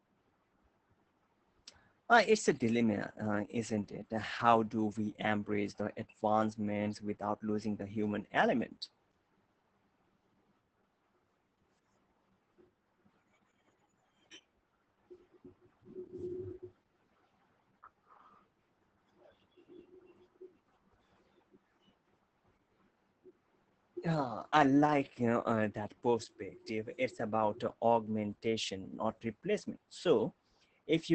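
From start to finish the speech sounds muffled, hoarse and slightly robotic, with nothing above about 8.6 kHz, so sibilants and breath lose their crispness. This is heavy Opus voice compression: the codec's SILK linear-prediction coder, running in wideband mode, models the voice and codes its excitation coarsely, which roughens the tone and gives it a synthetic edge. The depth of damage points to a bitrate around 10 kbps with 20 ms frames.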